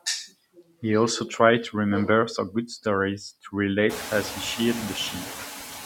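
Noise suppressor artifacts run through the whole of this speech recording. The processor pulls down by about 5 dB whichever frequency bands it judges to be steady background noise, frame by frame, so the residual noise dips in the pauses and swells back under the speech. Around 4 s the room noise climbs by about 24 dB and then sits roughly 10 dB below the speech.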